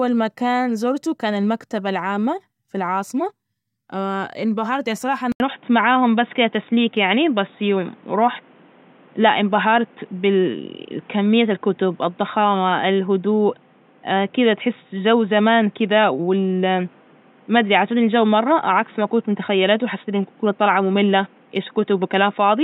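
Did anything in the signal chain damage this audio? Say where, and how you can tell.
Yes. At 5.32 s the capture side of the chain, at the driver or device-selection stage, likely switched its input to a poorer device, and the speech stays on it to the end. An 80 ms gap of silence marks the switch. From there the speech is band-limited, with nothing above 3.8 kHz, so it sounds dull and boxy. The level shifts by about 5 dB, and a new background noise floor appears, roughly 35 dB under the speech.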